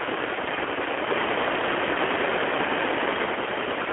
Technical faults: G.729 codec

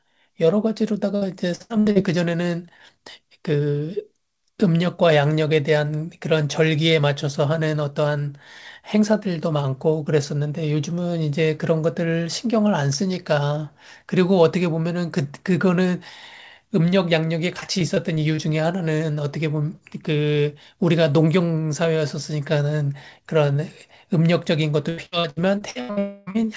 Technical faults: repeated packet loss (robotic sound); long network dropout

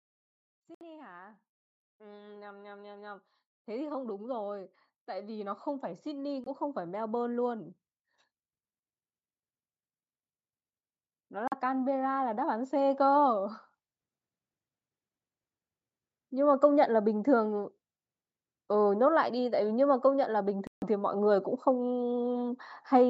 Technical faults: Bluetooth dropout; automatic gain rising

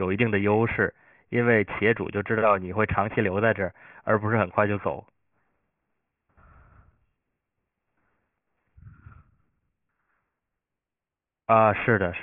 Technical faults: aliasing

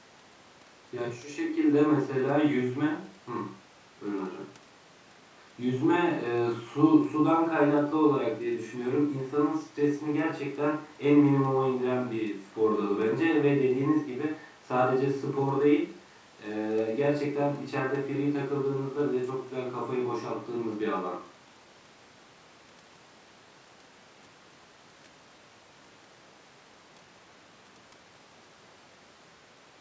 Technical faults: none

